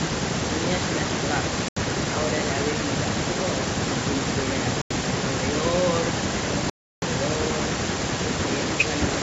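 Bluetooth stalls at 1.68, 4.82 and 6.70 s cut the speech to silence for 81 ms, 90 ms and 324 ms, then resume where it stopped, likely because interference held packets back until the headphone buffer ran dry and playback waited for resends.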